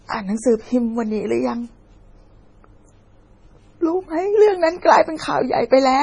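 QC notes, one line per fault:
Throughout: MP3 compression, heavy damage. Watery, swirly speech with smeared consonants and nothing above 10.4 kHz, likely from a very low bitrate around 24 kbps starving the encoder.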